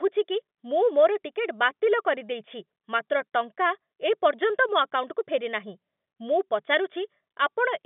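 No technical faults occur at any point in this speech.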